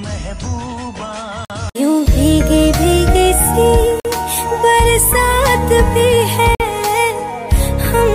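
The audio was delivered in blocks of about 2.5 s, and each block was joined to the next with a stretch of silence in between, a gap between chunks of 50 ms. Nothing is dropped, but the sound stops dead and resumes abruptly at 1.45–1.50 s, 4.00–4.05 s and 6.55–6.60 s. These short, hard-edged holes recur every 2.55 s, which points to padding or a late start at each chunk boundary.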